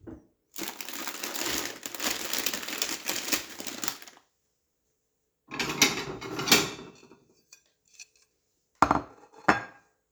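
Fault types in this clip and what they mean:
No technical faults can be heard in this sound.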